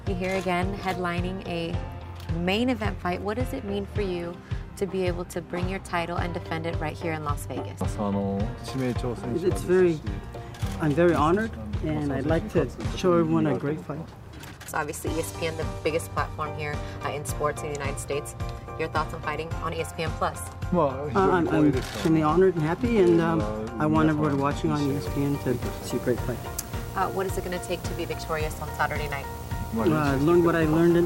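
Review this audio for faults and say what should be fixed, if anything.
From 24.85 s to the end at 31.05 s there is video or display buzz: a 59.94 Hz field-rate buzz with hash above it and a thin 15.7 kHz line-rate tone, sitting roughly 15 dB below the programme. A display or video cable is coupling its scanning signals into the audio path. To prevent it, route audio cables away from video lines and monitors, and keep the audio and video gear on a common ground.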